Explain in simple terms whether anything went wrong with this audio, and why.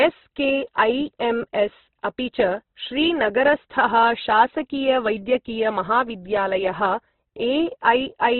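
Something did go wrong, and it lasts the whole clip, start to finish. The speech sounds squeezed and grainy, with nothing at all above about 4.1 kHz, so it's dull and boxy, like an old phone line. That's most likely heavy Opus compression: the encoder was starved of data, cut the range down to narrowband and roughly patched over the detail it couldn't afford, which leaves that rough, noisy texture on everything.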